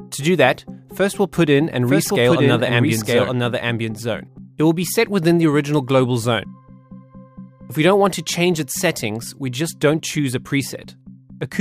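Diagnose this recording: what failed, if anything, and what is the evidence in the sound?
A doubled audio track runs from 1.64 to 4.38 s, likely from a second capture path or a misaligned edit. An undecaying full-band copy, about 5 dB quieter, trails by about a second and starts and stops abruptly, unlike an echo.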